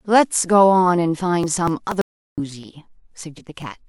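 From 1.2 s to 3.62 s, small regular ticks break into the speech every 0.24 s, around ten in all, each dropping about 10 ms of audio. These are periodic USB or driver dropouts: a recurring background task stalls the bus or driver, and the missed audio is simply skipped.

At 2.01 s the speech cuts to dead, total silence with no room tone, and resumes abruptly at 2.38 s, leaving 364 ms missing. This audio dropout to silence most likely comes from the input being lost while the recorder kept writing zeros.

Between 3.37 s and 3.41 s the speech lurches forward. Compressed frames were skipped here, roughly five frames of 42.7 ms, so about 200 ms of speech vanishes.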